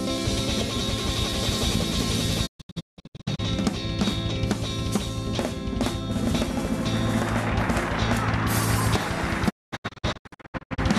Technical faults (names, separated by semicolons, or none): digital broadcast dropout